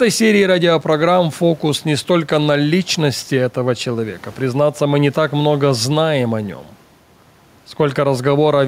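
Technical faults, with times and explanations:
Throughout: gain pumping. The gain swings by roughly 5 dB with the speech, bringing loud and soft parts closer in level. The likely cause is a fast limiter fighting excessive gain.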